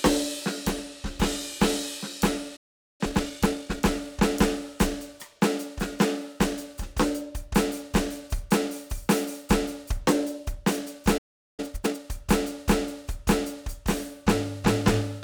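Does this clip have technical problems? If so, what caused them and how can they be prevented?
Yes. There are two playback stalls, where the music cuts to silence from 2.56 to 3.01 s and again from 11.17 to 11.60 s, roughly 0.4 s each, before picking up again. The player was likely starved of data or had its audio thread blocked. A larger playback buffer and keeping heavy work off the audio thread would prevent these.

Each stall is followed by time-compressed catch-up. From 3.01 to 3.85 s the music runs about 1.5 times fast, and from 11.60 to 12.00 s about twice as fast. Pitch holds steady, while small cross-faded cuts are used to clear the backlog. Preventing the stalls removes the need for this, or the player could simply resume without compressing the backlog.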